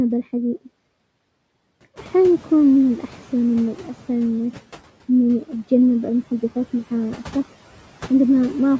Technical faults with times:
1.95-4.14 noise suppressor catching up

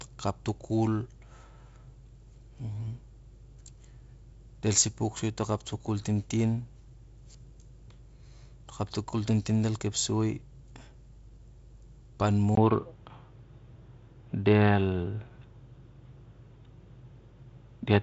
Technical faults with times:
12.55-18.03 input switched to a poorer device

